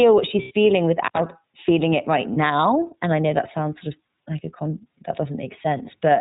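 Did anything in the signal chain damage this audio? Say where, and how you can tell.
Yes. Throughout, the speech sounds slightly rough and synthetic with nothing above 4 kHz, the signature of the iLBC codec. That fits 30 ms frames at about 13.33 kbps.

At 0.42 to 0.52 s, and at 2.34 to 2.37 s just after "feeling it right", a buzzy held vowel bridges the gap. These are lost iLBC frames concealed by the decoder, 90 ms then 30 ms.

At 1.04 to 1.19 s, just before "feeling it right", the sound drops out for about 72 ms with crackle at both edges. That points to an intermittent contact in the analogue wiring.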